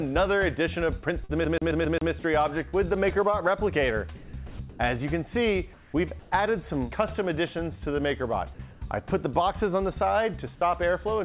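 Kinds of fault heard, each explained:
burst of packet loss: At 1.24 s the sound freezes into a held, fading continuation for about 50 ms, then picks up again with roughly 60 ms of the original simply gone, so the passage jumps forward. Several consecutive packets arrived too late or not at all. The receiver stretched the last good audio and turned it down across the gap rather than leaving silence. Inside this band-limited call, with nothing above 4 kHz, it is an abrupt, audible splice.
CD stuck on one turn: From 1.45 s to 2.12 s a single 0.13 s fragment plays five times in a row, each repeat separated by a tiny mute. The result is a quick, perfectly regular stutter. It is the classic skipping-disc effect. A scratch knocks the laser back one track at the same point on every rotation, so one revolution's worth of audio keeps replaying until the player breaks free.
short concealed packet loss: Around 2.69 s there is a brief smear lasting under a tenth of a second. 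About 38 ms of synthesized fill stands in for 40 ms of real audio, and the patch runs a few milliseconds long. A small packet loss left a hole that the decoder covered by extending the preceding sound's pitch or noise shape, then crossfading back into the genuine signal. Any short, sharp detail that fell in that window is lost.
sound dropped by the voice detector: Three times the sound gives way to flat, steady noise and then returns. The first is at 4.15 to 4.33 s, the second at 4.47 to 4.59 s and the third at 5.73 to 5.93 s. Roughly 120 ms, 100 ms and 90 ms of actual content disappear. The likely cause is the sender's voice activity detector judging quiet material to be background and halting transmission, so the receiver inserted comfort noise until detection resumed.
comfort noise in place of the background: At 4.69 to 4.79 s and 6.19 to 6.31 s the real background, which sits about 23 and 29 dB under the loud parts, turns into a smooth, characterless hiss. 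That hiss differs in level by only about 2 dB and 1 dB. The likely mechanism is discontinuous transmission. The sender went quiet during pauses, and the receiver generated synthetic noise roughly matched to the background's spectrum, discarding its texture.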